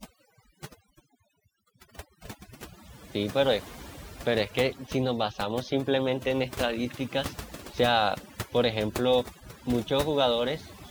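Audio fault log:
Throughout, overdone noise removal: a noise reduction stage was pushed too hard on a noisy speech recording, so any frequency band sitting near its noise estimate is pulled far down or switched off, and the quiet edges of the speech are cut along with it. Between phrases the background falls to near silence flecked with twinkling specks. Those isolated, shimmering specks set it apart from plain low-pass dullness or a noise gate's clean on-off cutting.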